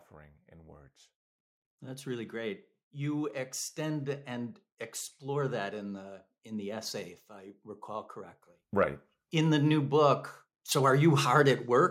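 Speech, with the automatic gain rising three times: 1.79–4.64 s (about 5 dB), 5.2–7.13 s (about 5 dB) and 7.85–11.68 s (about 6 dB), voice and background swelling together as the AGC chases a quiet input.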